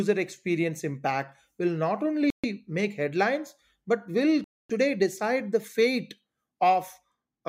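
At 2.30 s and 4.44 s the speech cuts to clean silence for 134 ms and then 253 ms before resuming. This is likely a Bluetooth stall, where the headphone buffer ran dry while delayed packets were resent. It differs from a codec dropout because the gap is silent, with no warble or clicks.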